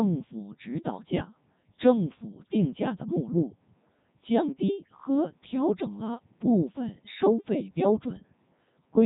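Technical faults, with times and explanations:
Throughout, Codec 2 vocoder. The speech sounds robotic and buzzy, with nothing above 3.8 kHz. The damage is heavy, and the detail suggests the codec's highest mode, around 3.2 kbit/s. The encoder keeps only pitch, voicing, energy and a rough spectral envelope. The decoder then rebuilds the voice from sine waves. The original waveform is gone, so breath, texture and natural roughness are replaced by a synthetic, even tone.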